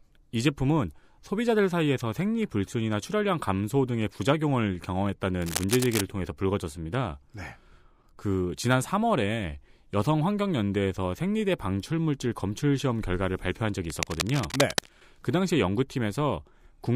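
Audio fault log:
5.42 to 6.01 s and 13.85 to 14.90 s: cable scratch noise. Two bursts of dense, uneven crackle and rustle sit over the speech. The first lasts about 0.6 s. The second lasts about 1.05 s. Each is only a few decibels below the speech, so it is plainly audible. The cause is likely a worn cable, plug or control being moved. Its contact resistance jumps about quickly, and that adds bursts of scratchy noise to the signal.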